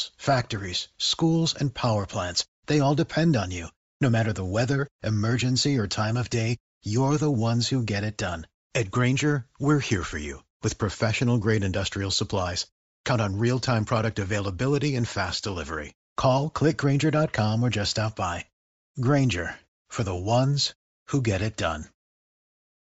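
Bluetooth LC3 compression throughout: the upper frequencies are noise-filled, giving the speech a breathy, grainy edge, likely from LC3 coding at a rate that fits 32 kbps.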